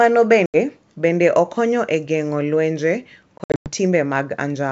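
Packet loss on an ADPCM call hits at 0.46 to 0.56 s, losing 80 ms (about four packets) before "bende okonyo e geng’o", then from 3.38 to 3.71 s after "okonyo e geng’o lwenje", where 200 ms (about ten packets) drops out in gaps up to 100 ms long. The holes are filled with silence and then the decoder's predictor and step size must catch up again, so the speech resumes slightly distorted.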